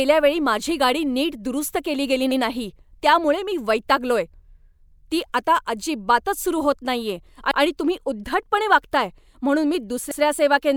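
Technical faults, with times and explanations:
2.31, 4.91, 7.51 and 10.11 s, overlapping chunks: the speech was handled in 2.5 s blocks, and each new block begins about 100 ms before the previous one ended. That 100 ms slice of speech is heard twice at every join, giving a brief stutter or click at the seam. It recurs at a regular 2.6 s spacing, for example just before "ती आता अजिबातच सुरू" and between "अजिबातच सुरू होत नाहीये" and "तुम्ही उद्धटपणे वागताय म्हणून".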